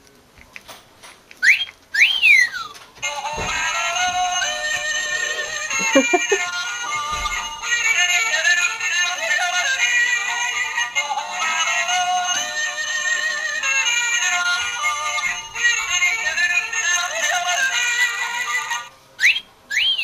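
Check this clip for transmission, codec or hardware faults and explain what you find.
One fault is present, near the end of the clip.

From 16.91 s to 19.27 s there is a block size mismatch (padded). One stage hands over blocks slightly shorter than the next stage expects, and each shortfall is filled with zeros. That puts a brief silent gap into every block, which produces a buzz at about 91.5 Hz, the block rate. The padding also stretches the audio, so it runs about 0.4% slow (0.996×) while the timbre stays unchanged.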